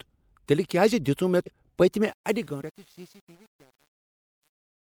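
Speech with two compressed-frame skips. At 1.45 s and again at 2.60 s the audio jumps ahead by about 200 ms, consistent with around seven 26.1 ms frames missing or rejected by the decoder. The fade-out runs from about 2 s to the end at 4.99 s, and from 2.03 s it shows truncation distortion on a fade. The gain stage keeps too few bits, roughly 9-bit resolution, and adds no dither, so the waveform quantises into coarse steps. This is worst from 2.44 s onward, where the fading tail turns gritty.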